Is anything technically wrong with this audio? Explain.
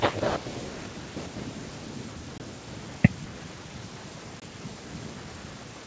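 Yes, there's packet loss on an ADPCM call, at 2.38–2.42 s and 4.40–4.43 s. Each is a hard-edged 20 ms dropout, consistent with one lost packet, and the decoder's predictor loses sync, so the sound comes back with brief distortion.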